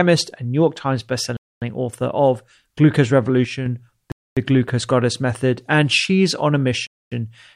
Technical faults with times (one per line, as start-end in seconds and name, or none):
1.37-1.62 gap between chunks
3.45-3.66 one channel drops out
4.12-4.37 gap between chunks
6.87-7.12 gap between chunks